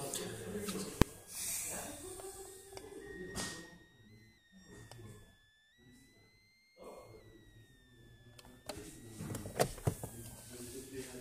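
A switching supply whistle runs through the whole clip: a thin, high tone near 2 kHz that wanders between about 1.5 and 2.2 kHz, sitting roughly 25 dB below the sound. A switching power supply running in audible burst mode or beating with another one causes it, showing on a spectrogram as a wavering horizontal line.

At 1.02 s, invalid numbers at full scale cause a single sharp bang. A calculation produced infinite or invalid values that were clamped to maximum amplitude for about 1.45 ms, which fits a 64-sample block. The waveform shows a brief flat slab at one extreme, and the spectrogram a bright vertical stripe.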